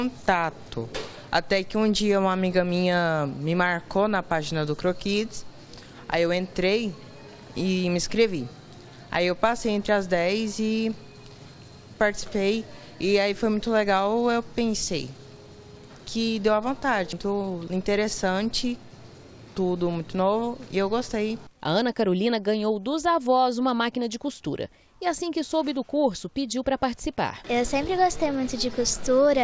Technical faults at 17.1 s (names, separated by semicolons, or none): CD skip